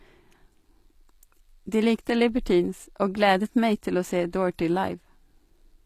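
From start to finish the speech carries plainly audible codec damage, most likely HE-AAC compression at a low bitrate, something around 24 kbps. At that rate the encoder keeps just the lower spectrum and fakes the treble by copying lower bands upward under a rough envelope. So the top end reaches high, but its harmonics don't line up with the real ones, and the s sounds come out gritty, metallic or lispy.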